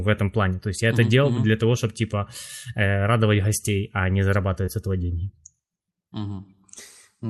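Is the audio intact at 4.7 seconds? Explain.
No. From 4.65 to 4.69 s, just after "гостей а не", there is short concealed packet loss. About 20 ms of audio arrived too late, and the receiver extended the preceding sound to fill the gap. It is heard as a brief smear rather than the abrupt silence of an unconcealed dropout.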